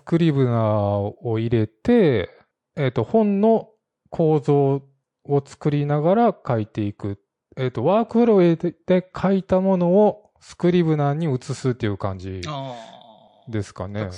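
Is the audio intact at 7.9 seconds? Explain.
No. From 2.06 s to the end, the speech loses everything above 11.3 kHz and sounds dull and smeared. This is an adaptive stream at a lower bitrate, switching abruptly without a gap to a version that points to roughly 53 kbit/s MP3 instead of 128.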